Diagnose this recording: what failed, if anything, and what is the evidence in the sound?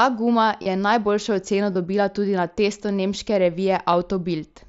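Stage: the Bluetooth link. The fault is concealed Bluetooth headset packet loss. Short, buzzy, held patches sit at 0.63 to 0.66 s and 1.73 to 1.75 s. A tiny blip follows at 3.92 s. The receiver filled the 30 ms and 22.5 ms gaps by repeating recent waveform.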